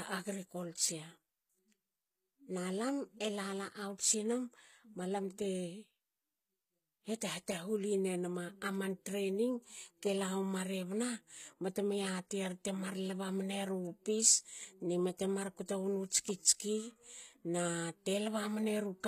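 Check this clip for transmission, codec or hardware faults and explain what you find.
One fault runs through the whole speech clip: HE-AAC compression is the likely cause of the damage, and it is plainly audible. The codec spends its small budget on the lower spectrum and synthesises the treble by spectral band replication, copying lower bands upward under a coarse envelope, which fits a bitrate near 20 kbps. Nothing sits above 14.9 kHz, and the rebuilt top end sounds gritty, with s sounds turning metallic or lispy.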